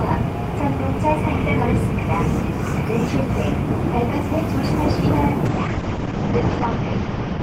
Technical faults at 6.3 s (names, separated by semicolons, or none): call bitrate drop